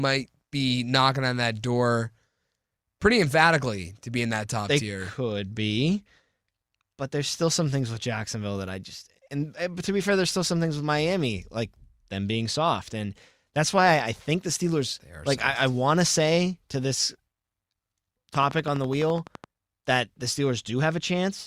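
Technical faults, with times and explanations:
18.35 to 19.45 s: train of clicks. Sharp ticks of matching shape arrive at a steady 11.9 per second, around fifteen in total. They peak about 5 dB above the speech. Interference from nearby equipment or a faulty connection or power supply is the likely cause.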